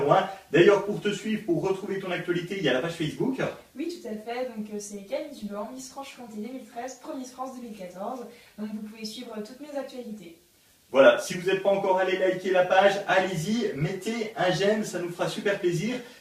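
From 4.94 s to 6.21 s the sound turns coarse and watery and loses its top end, then clears again. This is a call bitrate drop: the link's bandwidth estimate fell, so the encoder was told to spend far fewer bits, quantising more roughly and discarding high frequencies. The degradation points to the stream falling from around 128 kbps to about 24 kbps, holding at its lowest for about 1.2 s before recovering.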